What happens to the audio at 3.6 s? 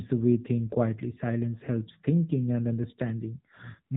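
At 3.6 s the speech is still passing through the AMR narrowband mobile codec, which runs through the whole clip. Nothing above 4 kHz survives. The vocal-tract model sounds plainly buzzy and synthetic, which fits a low rate near 8 kbps.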